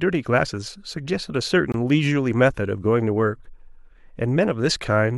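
A speech clip with a gap between stream segments: from 1.72 to 1.74 s the sound drops to silence for about 21 ms with hard edges. Two segments' timestamps fail to meet, which fits 2-second segments, and the player pads the hole with silence.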